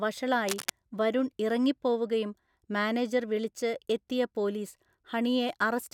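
From 0.48 to 0.71 s, just before "വരുൺ ഇറങ്ങിപ്പോവുകയും മാനേജർ വിളിച്ച്", a burst of cable scratch noise rasps over the speech, nearly as loud as the voice itself. It is most likely a worn lead, plug or control being shifted so its contact resistance flickers. Unlike a single click or a digital dropout, this is a dense, ragged cluster of crackle lasting about a quarter second, with the speech continuing underneath it.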